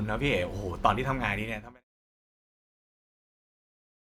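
There are no technical faults to describe; the speech simply fades out smoothly from around one and a half seconds, ending by 1.85 s.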